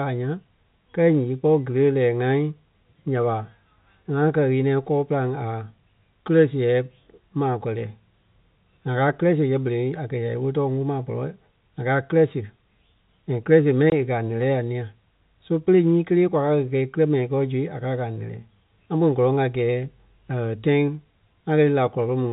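At 13.90 to 13.92 s, between "and kírɛ siɣe" and "e kɛ̀ a lɛ́lɛ", there is a short gap from packet loss filled with silence. A single 20 ms packet never arrived, and the receiver inserted digital silence in its place, so the speech drops out abruptly with hard edges. On the waveform it appears as a flat, near-silent strip with vertical cuts. On the spectrogram it is a blank vertical band, within the 4 kHz ceiling of the G.711 telephone coding.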